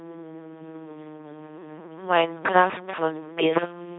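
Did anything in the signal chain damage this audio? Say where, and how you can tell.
Yes, an LPC-10 vocoder at the codec stage, throughout the clip. The speech comes out as a buzzing, mechanical robot voice with nothing above 3.8 kHz. Each moment is rebuilt from a pulse train or noise through a simple vocal-tract filter, which fits a 2.4 kbit/s rate.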